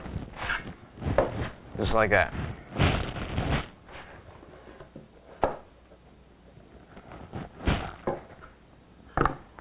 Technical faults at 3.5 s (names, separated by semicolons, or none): none